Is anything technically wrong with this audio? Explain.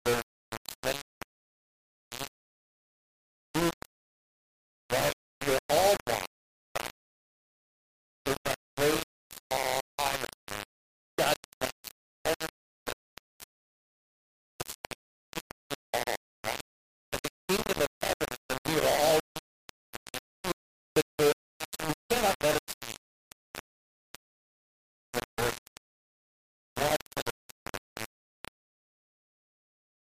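Yes. Throughout the clip there is low bit depth without dither. The sound is likely reduced to roughly 3 bits and rounded with no dither. The error tracks the signal at only about 5 dB below it, so the audio is coarse and grainy, with quiet passages sputtering or dropping out.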